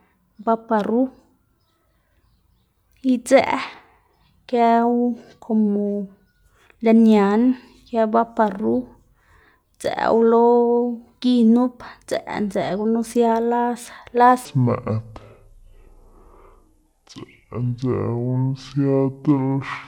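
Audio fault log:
14.45–19.88 s: section at the wrong speed. From 14.45 s to the end the speech plays at 0.58 times its original rate, so it drags noticeably and the pitch falls by roughly ten semitones, turning the voice deep and sluggish. Because rate and pitch shift together rather than independently, this is resampling, not time-stretching; the cause is likely this stretch being played back or conformed against a mismatched clock, stretching every waveform cycle.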